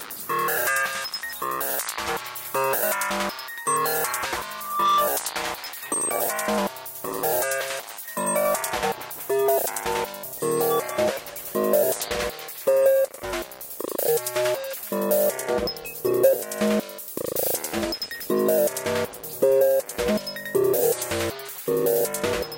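From 4.53 to 5.23 s a single tone near 1.2 kHz swells up over roughly a third of a second into a piercing squeal that rises a few decibels above the sound itself. This is loudspeaker feedback squeal: a microphone picked up its own loudspeaker, and at 1.2 kHz the loop gain exceeded one.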